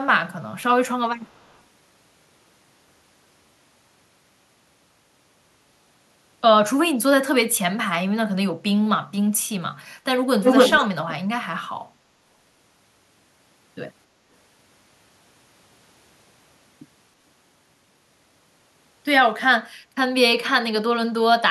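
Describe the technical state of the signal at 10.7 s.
An echo leak runs from 10.43 to 10.88 s: a copy delayed 276 ms, about 5 dB louder, likely from a loudspeaker echo canceller. It appears as a shifted duplicate of the speech pattern.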